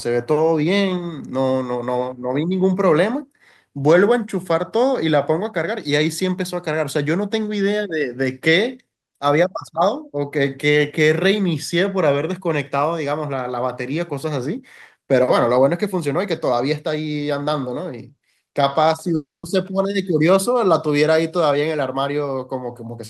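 A speech recording with a long network dropout from 19.15 to 19.46 s, likely from a stall in packet delivery. The last sound is stretched into a fading buzz, then about 180 ms of silence, and roughly 280 ms of speech never returns. A spectrogram shows smeared, fading harmonics before a blank gap.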